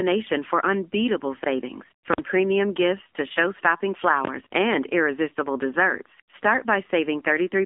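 From the start, the speech carries the AMR narrowband mobile codec sound: band limited to roughly 250 Hz to 3.6 kHz, plainly buzzy and synthetic, which fits a bitrate of about 7.4 kbps. At 1.42 to 1.46 s, just after "for unbeatable", chunks play out of order. A 20 ms chunk arrives one chunk late, leaving a brief jumbled moment with three hard joins.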